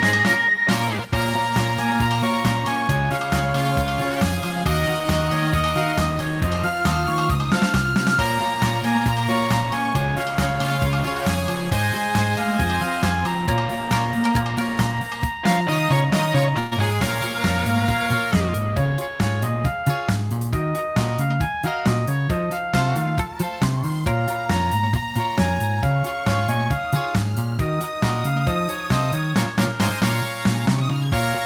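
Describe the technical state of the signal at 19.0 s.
At 19.0 s the audio is intact, with no dropout, distortion or other fault.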